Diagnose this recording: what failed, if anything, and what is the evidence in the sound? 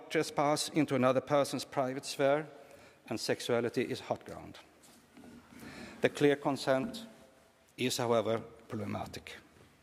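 Nothing in the signal chain audibly failed: the sound carries no dropouts, clicks, distortion, pitch or timing disturbances, or level breaks at any point.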